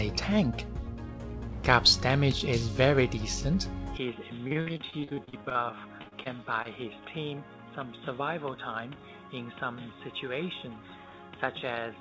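At 3.97 s the sound turns dull and boxy and stays so to the end. Nothing above 3.8 kHz remains. The level drops by roughly 10 dB, and a new noise floor sits well below the signal. This is likely an input switched to a poorer device.

From 4.48 to 5.57 s comes repeated packet loss, with robotic sound. Fifteen short holes are patched by stretching the last sound. The longest is 54 ms. About a third of the stretch is concealed, so it turns choppy. A second burst runs from 6.02 to 6.67 s. It has five gaps, the longest 39 ms.

From 5.37 to 5.77 s a jitter buffer slow-down repeats pitch periods. It adds 59 ms. Playback runs at 87% speed, same pitch, so the sound drags.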